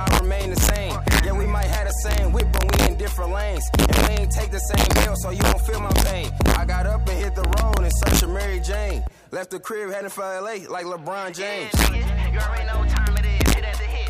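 Integer overflow runs through the whole clip: with the level driven about 2 dB past full scale, under one percent of samples exceed the limit and wrap to the opposite sign rather than flattening, so loud moments snap into violent cracks, far harsher than clipping's squared-off distortion.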